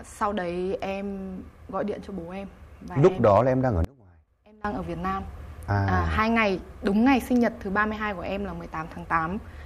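From 3.85 to 4.65 s the sound drops by about 27 dB and turns faint for 0.8 s, leaving only the difference between channels. The likely cause is one channel inverted: reversed polarity on one side cancels the shared content when summed to mono.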